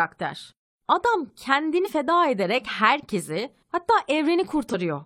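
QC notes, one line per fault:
1.81–1.88 s and 4.69–4.75 s: damaged data in a compressed stream. Two short glitches in the speech, roughly 66 ms and 54 ms long. Part of the compressed data got corrupted there, so the decoder misreads those frames, loses its place, and hunts for the next valid frame header before it can carry on. That garbled decode is what you hear in place of clean audio.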